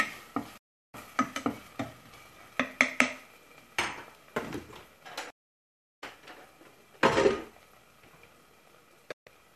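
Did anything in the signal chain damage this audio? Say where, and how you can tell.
Yes: a digital broadcast dropout at the receiver, which muted on failed frames. The sound snaps to silence at 0.58–0.94, 5.30–6.03 and 9.12–9.27 s.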